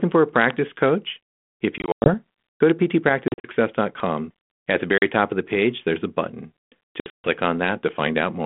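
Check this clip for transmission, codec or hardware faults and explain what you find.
Two faults recur in the speech: isolated bit error spikes and bursts of packet loss on an ADPCM call, heard over a band-limited line whose light coding texture fits 32 kbit/s G.726.

Bit error spikes occur at 0.50, 2.70 and 4.00 s. A flipped bit in a stored or transmitted sample throws its value by a power of two before the next sample returns to normal. The spikes at 0.50 and 4.00 s each involve one sample, and the one at 2.70 s spans three. Each is a single sharp tick unrelated to the speech. On a waveform it shows as a lone needle; on a spectrogram, as a thin vertical line through the whole band.

Packet loss on an ADPCM call occurs at 1.78 to 2.14 s, 3.28 to 3.52 s, 4.98 to 5.03 s and 7.00 to 7.29 s. Lost packets are filled with silence, and the receiving decoder's predictor and step size drift from the sender's. 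The worst bursts drop around ten packets, about 180 ms scattered over 280 ms and 200 ms over 240 ms, with the longest gap 140 ms. The sound cuts out abruptly and returns with brief, slight distortion. Waveforms show hard-edged flat gaps, and spectrograms show blank vertical slots.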